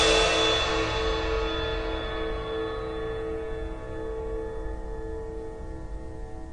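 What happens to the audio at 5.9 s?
At 5.9 s the music sounds dull and warbly, as throughout, likely from low-bitrate AAC compression quantising coarsely; a spectrogram shows a flat ceiling at 9.8 kHz.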